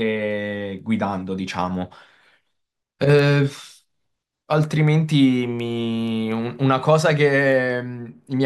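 Speech with word clock ticks from 0.31 to 8.24 s, about thirty sharp clicks roughly every fifth of a second. An unlocked receiving clock slips one sample each time, around 100 ppm off.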